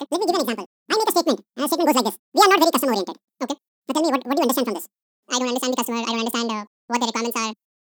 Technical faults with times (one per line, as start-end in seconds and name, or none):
0.00-7.96 audio read two samples at a time (double speed)